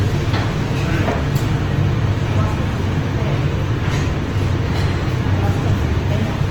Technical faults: Opus compression

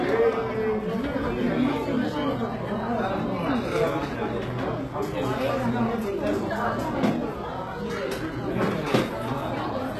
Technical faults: HE-AAC compression

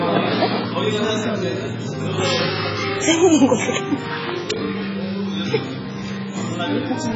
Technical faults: AAC compression

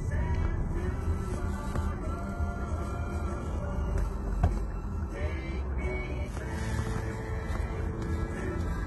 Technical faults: HE-AAC compression

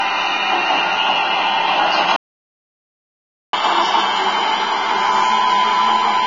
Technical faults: Vorbis compression; playback stall; catch-up at higher speed

